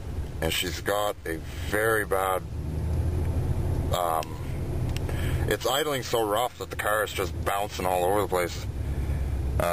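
No technical faults detected.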